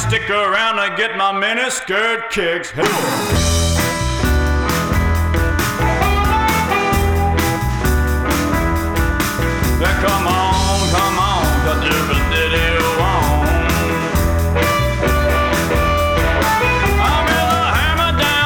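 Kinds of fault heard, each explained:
No faults can be heard anywhere in the recording, which keeps a steady, intact signal throughout.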